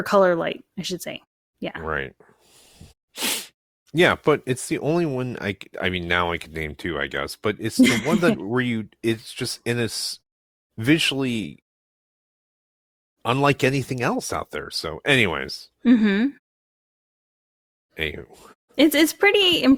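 No technical faults can be heard anywhere in this speech clip. In the longer pauses the output fades to silence as intended, and the sound returns in time for each next phrase.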